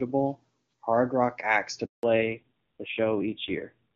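At 1.85 s, just after "hard rock acts to", the call is handed from one network to another and no speech frames arrive while the link switches over. This is a handover gap: the voice fades out within a few tens of milliseconds and the line stays silent for about 180 ms, until 2.03 s. Whatever was said during that stretch is simply missing, so the sentence jumps abruptly across the hole.

From 2.03 s to the end, the call falls back from the AMR wideband (HD Voice) codec to an older narrowband codec. Before the handover the wideband voice is clear and full. Afterwards, nothing above 4 kHz survives, so the voice turns muffled and telephone-like. Its grainy, rough texture points to a low-rate narrowband mode, around 5.9 kbit/s.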